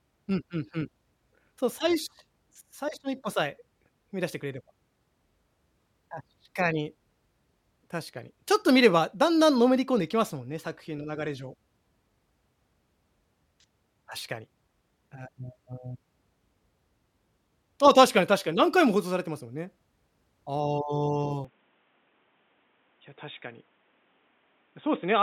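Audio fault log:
21.45–25.22 s: input likely switched to a poorer device. Speech abruptly dulls, losing everything above 3.8 kHz, and faint new background noise appears. There is no gap, and the level holds steady.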